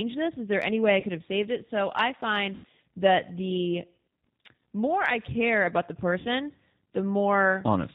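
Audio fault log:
throughout G.729 codec: Speech across the whole clip has the plainly audible roughness of G.729A, which fits an 8 kbit/s stream. Each 10 ms frame is rebuilt from a vocal tract filter, a pitch predictor and a few pulses, so voices sound slightly buzzy and synthetic. On a spectrogram, energy stops sharply at 4 kHz with nothing above, and harmonics look grainy and smeared rather than clean. The waveform shows pulse-like, slightly jagged cycles.
1.00–1.05, 2.55–2.65, 4.20–4.23, 6.19–6.28 VoIP packet loss concealed by the speech codec: Audio went missing for about 30, 90, 30 and 60 ms, which fits one, three, one and two lost packets. Landmarks are after "there any way I" and before "have saved it", between "I find" and "that the", and after "care about the". The decoder stretched its last pitch and filter into a buzzy tone or coloured noise that fades, and weak, distorted speech lingers after each gap. 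The waveform shows a decaying envelope.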